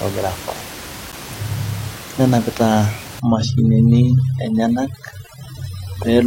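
At 1.12 s there's a hard-edged hole of about 9 ms, a gap between stream segments: the timestamps don't quite meet, so the player pads that slot with silence. From 3.2 s onward, overdone noise removal takes over. The room noise, about 15 dB under the speech, drops and breaks up into twinkly specks.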